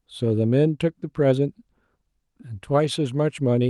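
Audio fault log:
No faults: the speech comes through a WebRTC call path working as expected, with its content reaching up to about 12 kHz, which fits an Opus codec limited to that bandwidth.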